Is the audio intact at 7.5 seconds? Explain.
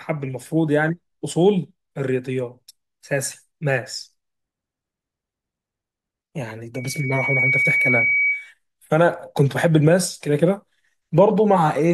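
No. At 7.5 seconds the speech is overlaid by loudspeaker feedback squeal, which runs from 6.75 to 8.52 s. A microphone is picking up the loudspeaker it feeds, and at 2.3 kHz the loop gain exceeds one, so that frequency feeds itself into a piercing single tone roughly as loud as the speech. Unlike a steady interference whistle, it swells from nothing over somewhat under a second rather than starting at full strength.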